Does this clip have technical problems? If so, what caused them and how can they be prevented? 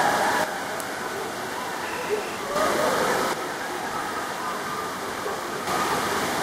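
Yes. The level drops abruptly by about 6 dB from 0.44 to 2.56 s and again from 3.33 to 5.67 s, with the sound otherwise unchanged. This is likely one channel dropping out before the stereo sum. A waveform steps to half height, and a spectrogram dims evenly across all frequencies. Secure cables and connectors, and watch both channel meters while recording.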